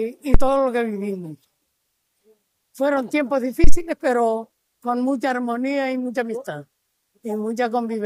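Two phantom power thumps, at 0.34–0.52 s and 3.64–3.77 s, come from a supply switching on or off on the live input and pushing a voltage step through the coupling capacitors. Each decays within about 40 and 30 ms, showing as a large one-sided waveform swing and a low-frequency smear along the spectrogram's bottom.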